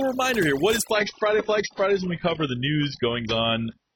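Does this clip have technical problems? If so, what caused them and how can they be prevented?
Yes. Throughout, overdone noise removal leaves the background near-silent with twinkling specks. It strips quiet parts of the speech. Set noise reduction gently and check the result by ear.

From 0.91 s to the end, the adaptive stream switches to a lower bitrate. Nothing remains above 6 kHz, and codec smearing rises. This fits a drop from roughly 96 to 16 kbit/s AAC. Give the stream enough bandwidth, or cap how low it may switch.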